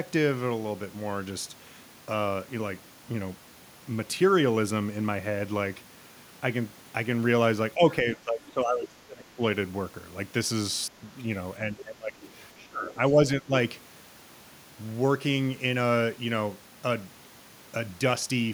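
Speech recording. Speech suppressed in double talk dips the talker at 7.75–7.82, 8.02–9.41, 11.7–12.18, 12.55–13.17 and 13.36–13.53 s, by up to roughly 25 dB. An echo canceller likely turned both sides down. The other side's voice leaking through appears faintly at 8.5 s and 12.22–12.3 s, far below the talker. This is likely loudspeaker echo the canceller failed to remove.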